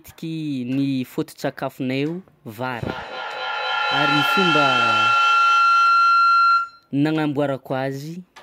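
A feedback howl runs from 2.71 to 6.95 s. A microphone and loudspeaker on the same call are sharing one room, and each pass around that loop comes back louder than it left. Repeats of the speech build rather than decay, narrowing to a tone around 1.5 kHz that pulses about every fifth of a second, the loop's delay. At its peak the howl sits about 5 dB above the speech.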